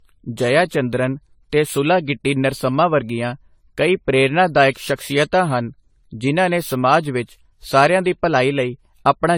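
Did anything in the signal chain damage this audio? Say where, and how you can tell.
Yes. Throughout the speech there is generation loss at the codec stage, likely from around ten rounds of AAC-LC re-encoding near 64 kbit/s. It sounds swirly, hollow and smeared, with blurred onsets. On a spectrogram, stacked holes and smearing appear below a cutoff at 19.3 kHz.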